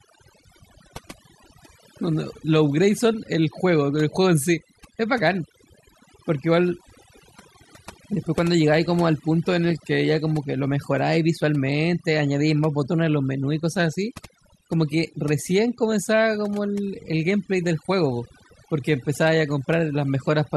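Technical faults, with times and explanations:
Throughout, overdone noise removal: the background drops and breaks up into small twinkling specks. A noise reduction process has been pushed too hard, switching individual frequency bands down or off whenever their level sits close to its estimate of the noise floor. Leftover isolated bands flicker as specks, and quieter parts of the speech that resemble the noise get stripped away with it.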